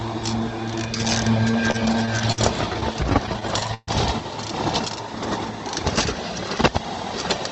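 From 1.51 to 3.90 s the sound suffers repeated stalls (stutter): the jitter buffer kept running dry, so playback paused again and again while the last sound was held, about 0.38 s in all, longest 133 ms. Unlike packet loss, nothing goes missing; the sound drags and hiccups.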